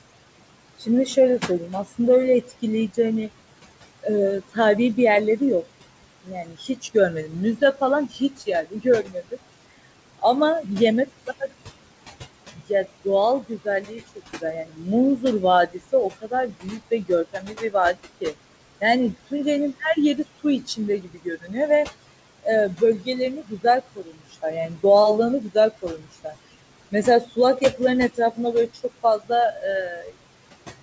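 Speech, with noise suppressor artifacts running through the whole clip: the suppressor pulls the room noise down by about 20 dB between phrases and lets it back up under the voice. The room noise sits only about 14 dB below the speech, which gives the suppressor a lot to fight. The same processing produces speech cut by the noise suppressor in seven stretches: 0.78–3.29 s, 4.02–5.64 s, 6.24–11.52 s, 12.52–21.55 s, 22.43–24.84 s, 25.41–26.34 s and 26.91–30.16 s. Within them, quiet consonants and word tails are mistaken for noise and dropped by up to about 21 dB, totalling about 7.2 s of swallowed syllables, heaviest between 12.5 and 21.6 s. The call path's G.722 coding caps the band at 8 kHz, consistent with a 64 kbps setting.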